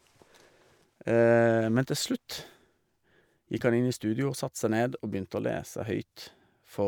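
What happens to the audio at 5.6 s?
Nothing goes wrong at 5.6 s; the speech continues through that moment without any audible dropout, glitch or distortion.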